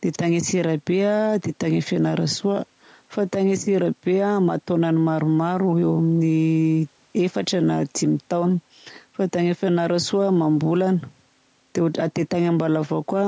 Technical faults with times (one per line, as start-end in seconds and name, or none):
none